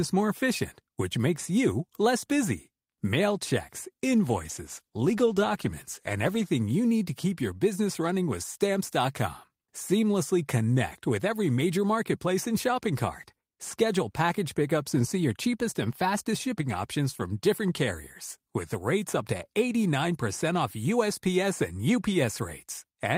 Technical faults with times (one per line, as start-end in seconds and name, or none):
4.19-6.55 call bitrate drop